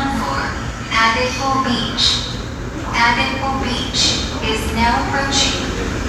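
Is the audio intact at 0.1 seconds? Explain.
Yes, the audio is intact at 0.1 seconds, with no dropout, distortion or other fault audible at that moment.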